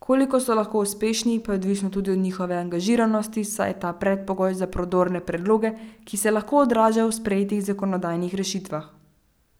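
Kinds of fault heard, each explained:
Nothing stood out on listening to this speech recording.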